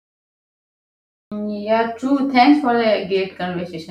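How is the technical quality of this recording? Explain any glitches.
The recording has one clear flaw: a cut-off start. From 0.00 to 1.32 s there is only digital silence, then the speech begins abruptly mid-sound at 1.32 s with no natural attack. Capture evidently began late. Unlike a dropout, nothing precedes the gap, so the sound enters already in progress rather than resuming.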